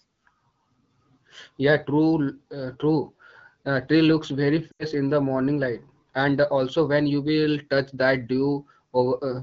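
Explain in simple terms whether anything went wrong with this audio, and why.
Lost AMR speech frames occur at about 4.71 to 4.85 s, between "tree looks very" and "in the morning light". Radio errors on the phone link corrupted a short run of speech packets, so the decoder filled the gap by repeating its last good sound settings while turning the volume down. The sound drops to near silence quickly, as wideband decoding does, then returns weak or rough for a moment.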